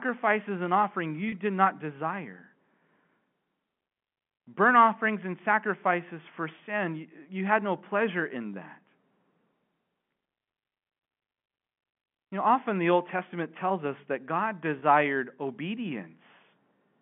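Packet loss with pitch repetition occurs at 1.29 to 1.32 s, between "and offering" and "did not", and again at 14.79 to 14.82 s. Each time about 30 ms of audio went missing, consistent with a single lost packet. The receiver filled the gap by replaying the last pitch cycle, so the sound briefly holds with a slight buzzy sustain instead of dropping out, within the 150 Hz to 3.4 kHz telephone band of the G.711 line.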